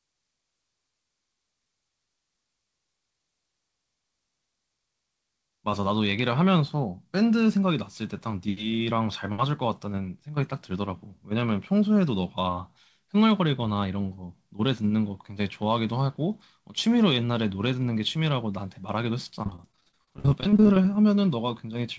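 From 19.43 to 20.85 s the speech breaks into repeated packet loss with that robotic sound: dozens of short holes, the longest around 51 ms, each patched by stretching the previous sound, so roughly a third of that stretch is concealment and comes out choppy, with pieces missing. The call-path band limit, with nothing above 8 kHz, fits G.722.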